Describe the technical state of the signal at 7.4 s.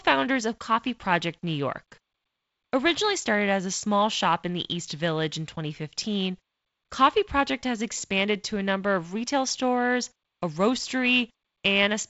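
At 7.4 s the speech is intact, with no fault at that moment beyond the light hiss and band limit near 7.7 kHz of its G.722 wideband telephone coding at 48 kbit/s.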